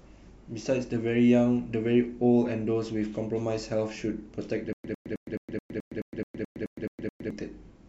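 Playback likely stalled from 4.73 to 7.30 s, replaying its last fragment at each retry and then running empty. This gives stutter with silent gaps: a 102 ms speech burst repeats twelve times every 215 ms, with 112 ms of digital silence between. The speech meant for that span is lost.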